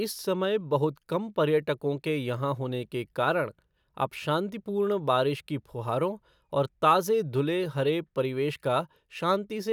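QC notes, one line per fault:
No faults were found in this speech recording. There is nothing to log against any time in it.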